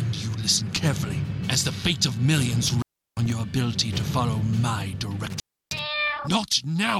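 Between 2.67 and 3.32 s, and again between 5.30 and 5.81 s, the audio shows an intermittent contact fault: a loose plug or cable briefly loses its connection, so the signal vanishes for about 0.35 s and then 0.31 s. Crackle marks the moments the contact breaks and remakes, and faint hiss remains while the line is open. Those ragged edges and residual noise set it apart from a digital dropout, which falls to clean silence with abrupt boundaries.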